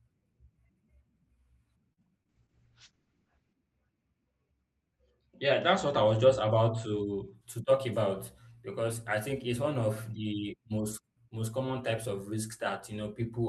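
Just before the two-second mark, from 1.93 to 1.99 s, there's a short stall from a late packet. A chunk of the call didn't show up on time, so the jitter buffer ran dry and the receiver held the last bit of sound for about 38 ms until the data arrived, then carried on where it left off. Nothing's actually lost, but that moment drags a touch, and everything after it runs about 38 ms later.

A moment later, at 2.23 to 2.27 s, there's a short concealed packet loss. This time about 20 ms of audio really never made it to the decoder. The receiver papered over the gap by extending the preceding sound for roughly 18 ms, continuing its pitch or filling in with shaped noise, and then blending back into the real signal. You hear it as a quick smear or little wobble.

Right after that, from 2.30 to 7.41 s, comes a call bitrate drop. The bandwidth estimate fell and the encoder got squeezed hard. The coarseness is consistent with a fall from around 32 kbps down to about 7 kbps, bottoming out for about 1.25 s. 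The top end gets clipped too, with the audio band shrinking from 12 kHz to 8 kHz. The speech turns rougher, a bit watery and duller until the bitrate climbs back.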